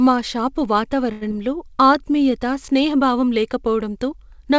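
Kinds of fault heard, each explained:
Short stall from a late packet: Just after "మా షాపు", from 1.12 to 1.23 s, a packet arrived late and the jitter buffer ran dry. The receiver held the last sound for 94 ms until it came, then resumed without losing anything. The result is a drawn-out sound with a slight buzz or dip.
Short concealed packet loss: At 1.29 to 1.32 s, still following "మా షాపు", 40 ms of audio never reached the decoder in time. Only 8 ms was filled by extending the preceding sound, so there is a brief smear or wobble, and the delay dropped by roughly 30 ms.
Jitter buffer slow-down: From 1.75 to 2.31 s the receiver rebuilt its reserve by repeating single pitch periods and bits of pauses, adding 40 ms. Playback runs at 93% speed with unchanged pitch, so the sounds are slightly drawn out and may warble faintly.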